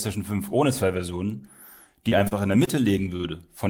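From 2.09 to 2.83 s, repeated packet loss gives choppy, robotic speech: five gaps, the longest 29 ms, with 60 ms lost outright rather than merely held.

At 3.16 s, a short stall from a late packet stretches the last sound by 34 ms before resuming where it left off, so it drags rather than skips.

At 3.22 s, a short concealed packet loss leaves a brief smear; unlike the stall, 20 ms is genuinely missing, covered by only 11 ms of fill.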